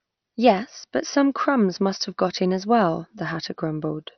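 Speech clip, dull throughout with nothing above 6.1 kHz and a gurgling, granular texture, likely from heavy MP2 compression at a low bitrate, roughly 48 kbps.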